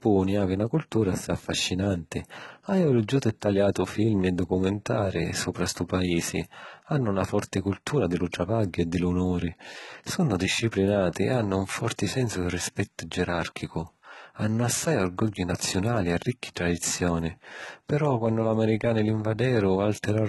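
Speech with HE-AAC compression throughout, likely a very low-bitrate encode: s sounds are gritty and lispy, and a spectrogram shows blocky, copied treble stopping dead at 11.8 kHz.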